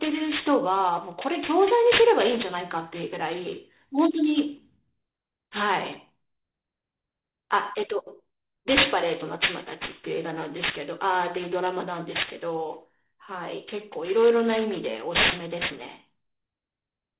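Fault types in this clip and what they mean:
aliasing: Throughout, sibilants sound gritty and metallic, and energy crowds hard up to 4 kHz. The rate was cut without filtering first, which fits a drop to 8 kHz, so higher frequencies fold back below 4 kHz, loud enough to nearly rival the speech.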